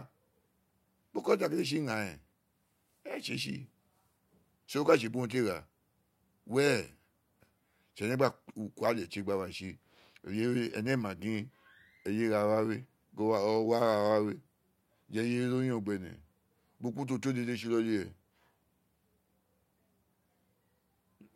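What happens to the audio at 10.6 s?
Nothing goes wrong at 10.6 s: the speech runs on intact through that moment, with no dropout, click or other fault.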